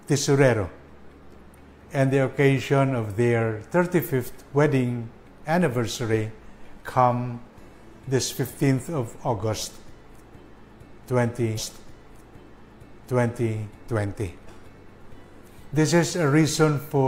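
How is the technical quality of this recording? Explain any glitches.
One glitch stands out: a stream segment repeated. From 11.54 s to 13.55 s, about 2.0 s of audio plays a second time because the player queued the same segment twice. A small blip marks the jump back, visible as a thin vertical break, followed by a spectrogram pattern that duplicates the preceding stretch.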